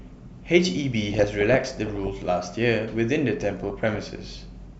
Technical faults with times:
1.12-2.08 DAB burbling
3.45-3.99 DAB burbling

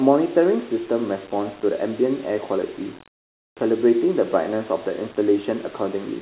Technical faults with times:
none

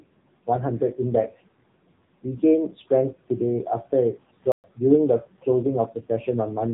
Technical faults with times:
0.00-6.73 AMR narrowband mobile codec
4.52-4.64 playback stall

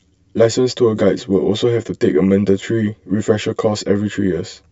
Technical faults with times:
0.00-4.71 channel delay (comb filtering)

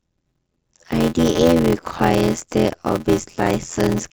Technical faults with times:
0.00-4.13 block size mismatch (padded)

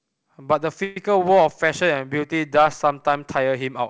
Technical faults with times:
0.84-0.97 call audio freeze

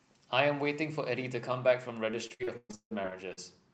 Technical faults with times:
2.11-3.39 repeated packet loss (robotic sound)

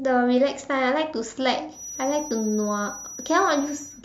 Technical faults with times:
1.70-4.04 feedback whistle

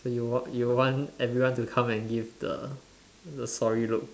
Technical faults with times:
none

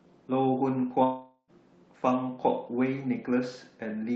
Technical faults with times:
1.03-1.51 long network dropout

